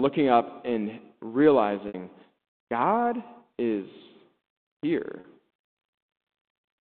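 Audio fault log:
1.88 to 1.94 s and 5.20 to 5.24 s: packet loss with pitch repetition. Gaps of 60 ms and 40 ms, consistent with three and two lost packets, were filled by repeating the last pitch period, so each sounds like a brief, held, buzzy tone within the narrowband telephone speech.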